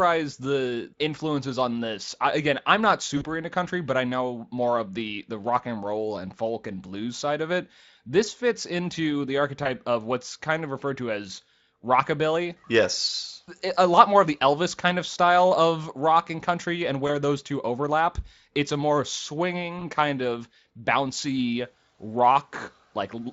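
Four short stretches of VoIP packet loss concealed by the speech codec turn up in this light-sounding Speex speech. The first, at 3.17 to 3.27 s after "I again I'm not", covers about 40 ms of missing audio, which fits two lost frames. Then come single-frame gaps of about 20 ms each at 9.63 to 9.67 s, at 17.07 to 17.10 s before "those two overlap", and at 19.79 to 19.82 s just ahead of "kind of bouncy". At each one the decoder repeats its last pitch and filter with falling gain, so the sound smears into a brief buzzy tone or coloured noise that fades, and the voice stays weak or distorted until it recovers.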